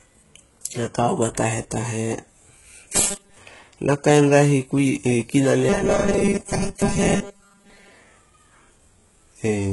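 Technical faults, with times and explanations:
Throughout, HE-AAC compression: The heavy damage across the whole clip points to a likely HE-AAC encode at a very low bitrate, which fits roughly 12 kbps. The encoder keeps only the lower band and synthesises the treble by copying lower bands upward under a coarse envelope. The top end sounds bright but false, with mismatched harmonics and gritty, lispy sibilants, and there is nothing above 11.5 kHz.
2.89 to 3.37 s and 5.69 to 7.92 s, robotic sound from repeated short buffers: In both stretches, fresh audio likely arrived too seldom. The player filled each gap by looping the last few milliseconds, so most of the real audio in these spans was skipped rather than played. The loop repeats at 200 Hz, once every 5 ms, and imposes a buzz at that fixed rate. The speech collapses into a rigid, metallic buzz that only loosely follows the speech's shape.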